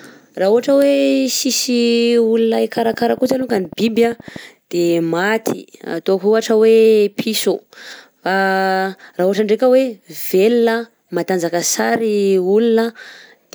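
From 2.77 s to 4.37 s, a train of clicks runs over the speech. The pulses arrive evenly, about 12.6 per second, and there are around twenty of them. Each click has much the same sharp shape. They peak at about the level of the speech itself. The effect is a steady ticking laid across the sound. The likely cause is electrical interference from nearby equipment or a faulty connection or power supply.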